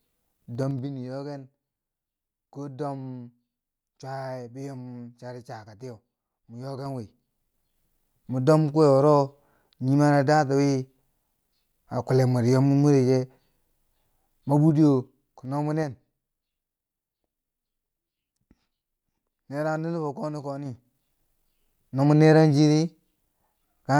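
Speech carrying zipper noise at 0.51–0.90, 6.74–7.85, 14.51–16.0 and 20.61–20.99 s, where the gain moves in unsmoothed 3 dB steps, each step clicking audibly.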